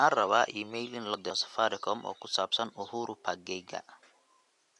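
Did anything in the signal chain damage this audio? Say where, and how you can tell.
No, the signal chain did no damage.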